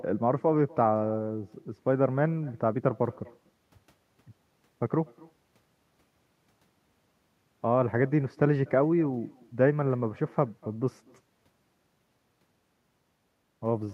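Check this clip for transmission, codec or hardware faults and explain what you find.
One fault runs through the whole clip: echo with no canceller. At the far end the call is coming out of a loudspeaker, the microphone there picks it up, and nothing subtracts it before it is sent back. The speech therefore returns after the network round trip, roughly a fifth of a second late and about 25 dB down. It sounds like a faint, thin shadow trailing each phrase. On a spectrogram every speech burst carries a weaker duplicate offset by around 200 ms. In the waveform, small tails follow each peak.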